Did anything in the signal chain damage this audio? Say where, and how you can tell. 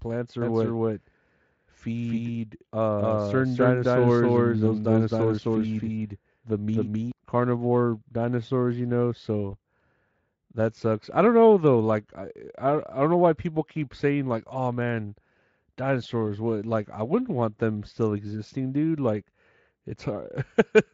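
Yes. From 0.42 to 7.12 s, just before "carnivore dinosaurs you know", there's a doubled audio track: an equally loud dry copy trailing by roughly 300 ms. That most likely comes from a second capture path or an edit.

At 9.51 s, after "carnivore dinosaurs you know", there's network VoIP packet loss concealed by the speech codec. The Speex decoder bridges what sounds like one lost 20 ms frame with a brief, fading fill extrapolated from the preceding speech.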